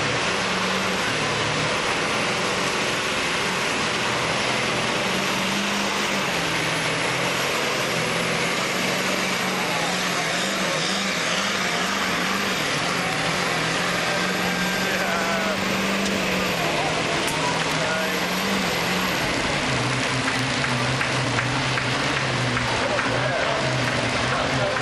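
No technical faults are audible.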